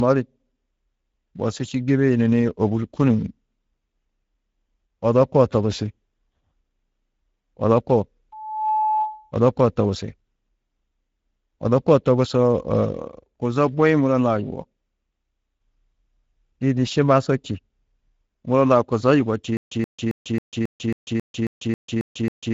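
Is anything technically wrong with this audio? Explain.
Yes, three faults are audible.

The Speex codec damage runs through the whole recording. This CELP speech codec spends too few bits on the excitation signal, so the speech sounds hoarse and noisy, and nothing reaches above 7.7 kHz. The plainly audible damage fits a mid-rate setting of roughly 16.8 kbps.

A loudspeaker feedback squeal sounds from 8.32 to 9.32 s, just before "odo koo". The microphone is picking up its own loudspeaker, and the loop gain exceeds one at 861 Hz. That single tone swells over a few tenths of a second until it is about as loud as the speech.

A stutter with silent gaps starts at 19.57 s and continues to the end. A 128 ms fragment repeats every 271 ms, with 143 ms of digital silence between repeats, and the audio that should have played is lost. The likely cause is a stalled player or stream that replays its last buffer on each retry.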